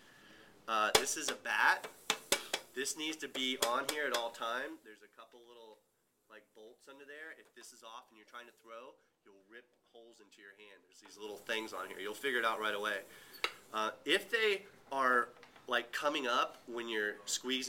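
No technical faults are audible.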